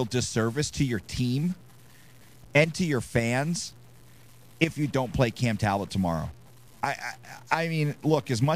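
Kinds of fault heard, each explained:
Stuck bit: a grainy noise sits on the speech throughout, and the pauses fill with noise instead of going quiet. That's likely one data bit jammed at 0 or 1, knocking about half the samples off by a step of roughly -50 dBFS.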